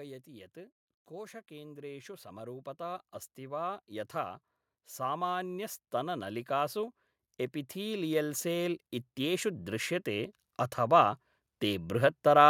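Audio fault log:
0.26–4.42 s and 4.96–11.91 s, automatic gain rising: the gain control hears the speech as too quiet and keeps turning itself up, about 7 dB over the first stretch, then about 11 dB more over the second, so voice and room noise swell together.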